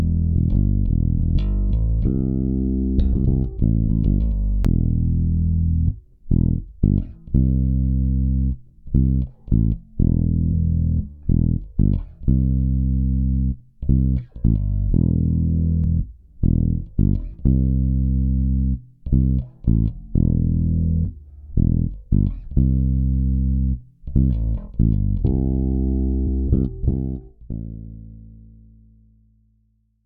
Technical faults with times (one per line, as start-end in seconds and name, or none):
4.65 damaged data in a compressed stream
10.52 damaged data in a compressed stream
15.84 damaged data in a compressed stream
21.04 damaged data in a compressed stream
26.26 damaged data in a compressed stream